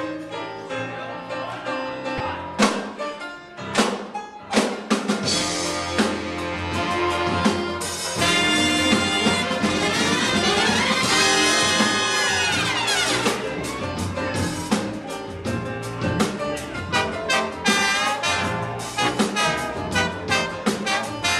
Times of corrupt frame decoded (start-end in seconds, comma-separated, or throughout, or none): 2.17-2.22